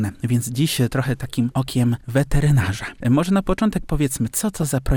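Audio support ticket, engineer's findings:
Short noise blips over the programme, 4.35–4.64 s. DAB burbling: weak reception lets residual bit errors (around 0.2 %) past error correction into the MP2 audio. Corrupted data hits individual sub-bands across roughly fifteen damaged frames.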